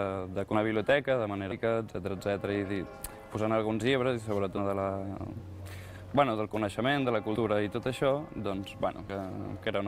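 Compressed frames skipped at 0.53, 1.51, 4.57, 7.35 and 9.09 s. Frames were lost or rejected by the decoder, so the audio jumps ahead by a tenth to half a second, fitting 20 ms frames.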